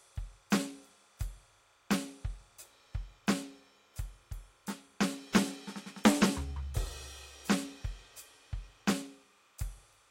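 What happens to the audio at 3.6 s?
At 3.6 s there's timecode bleed, running through the whole track: linear timecode leaking in, chirping faintly between roughly 1 and 2 kHz, well under the music, consistent with 30-frame code.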